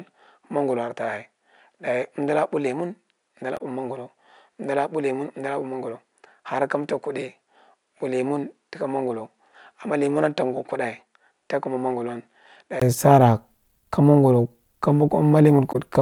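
From the start to 12.82 s, the input was likely switched to a poorer device: the speech is band-limited, with nothing above 10.5 kHz, about 10 dB quieter and carrying new background noise, until a 20 ms silence where it clears. At 3.57 s and 15.71 s, damaged data in the compressed stream makes the decoder lose sync, producing brief blips.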